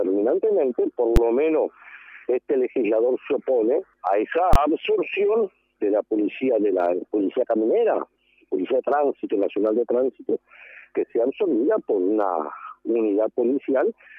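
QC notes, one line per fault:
1.16 s, invalid numbers at full scale: a calculation produced infinite or invalid values, which were clamped to the extreme sample value for one processing block of about 10.7 ms, which fits a 512-sample buffer. The block is so short that the jump to the extreme value and back merges into a single loud bang.
4.53–4.56 s, invalid numbers at full scale: the same failure over a longer block of about 21.3 ms, which fits a 1024-sample buffer. The output is pinned at one extreme value, far beyond the audio's peaks, for the whole block, producing another sharp, very loud bang.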